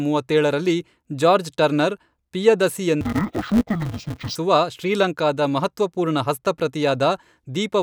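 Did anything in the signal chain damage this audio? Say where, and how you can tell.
Yes. From 3.01 to 4.36 s the speech turns dull and robotic, buzzing at 188 Hz without a clear octave drop. This is interleaved audio read as planar at sample-format conversion: each 5.33 ms block, fitting a 256-sample buffer, splits into half-speed halves.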